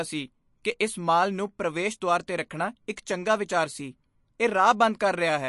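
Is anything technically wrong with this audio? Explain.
Yes. Throughout the speech there is nothing above about 11.3 kHz, with a watery, swirling quality and smeared attacks. This is likely MP3 compression at a low bitrate, roughly 48 kbps: the encoder cuts the treble and zeroes weak frequency lines, which flicker between frames.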